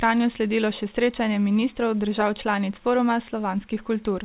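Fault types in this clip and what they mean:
No faults are present in this speech clip.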